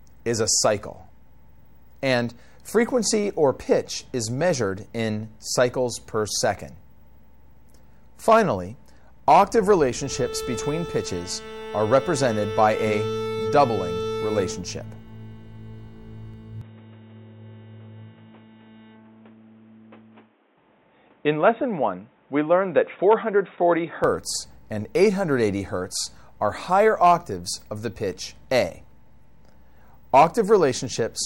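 At 16.61 s the sound abruptly turns dull and boxy, nothing above 3.8 kHz, until 24.04 s: likely an input switched to a poorer device.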